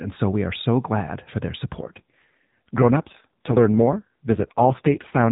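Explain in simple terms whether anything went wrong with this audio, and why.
From 1.80 s, just after "so glad for their", to 5.30 s, the speech turns rougher and buzzier. This is an AMR rate drop: the phone network switched the mobile speech codec to a much lower rate, leaving fewer bits to describe the voice.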